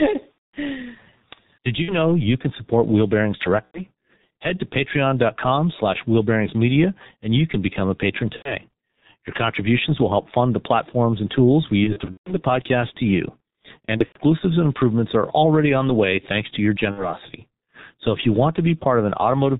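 Throughout, the speech carries heavy G.723.1 codec damage, the sound of the 6.3 kbit/s mode. The coder rebuilds the voice from a coarse model refreshed only once per 30 ms frame, so it comes out muffled and hoarse and the consonants smear together. On a spectrogram nothing rises above 4 kHz, and the harmonics look blocky and smeared rather than crisp, changing in coarse steps.

VoIP packet loss concealed by the speech codec occurs seven times: at 0.32–0.54 s, at 1.82–1.94 s just before "you can support", at 3.66–3.87 s, at 8.36–8.56 s, at 11.84–12.39 s between "platforms and tools we" and "podcast to you", at 13.85–14.18 s between "podcast to you" and "and improvements are already", and at 16.91–17.13 s. In each, the decoder fills the missing audio by repeating its last pitch and filter at falling gain. The longest single gap, about 210 ms at the start, fits roughly seven lost 30 ms frames. 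The 11.84 s and 13.85 s events are scattered clusters, with runs of up to 150 ms and 90 ms. Each sounds like a stretched buzzy tone or coloured noise fading away, and the voice stays weak briefly afterward. The waveform shows a smooth decaying envelope there.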